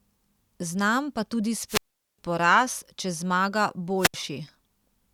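At 1.68 s the speech breaks up in a wireless microphone squelch dropout. The analogue FM radio signal fades, static rises briefly, and the receiver's squelch mutes the output. A hole of near silence lasts about 0.41 s before the speech returns at 2.19 s with "poraz če zmaga". The same fault recurs after "poraz če zmaga", from 3.97 to 4.14 s. This time the mute is shorter, about 70 ms.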